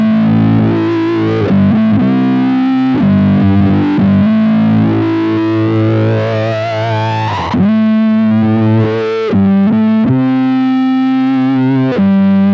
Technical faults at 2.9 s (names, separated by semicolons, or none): none